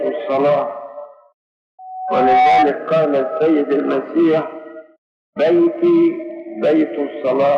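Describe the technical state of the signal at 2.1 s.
At 2.1 s the signal is in the middle of a loudspeaker feedback squeal, running from 1.79 s to 2.74 s. A microphone is picking up the loudspeaker it drives, and at 751 Hz the loop gain has passed one, so that tone feeds on itself. It swells over most of a second into a steady squeal that sits a few decibels above the rest of the sound before it stops.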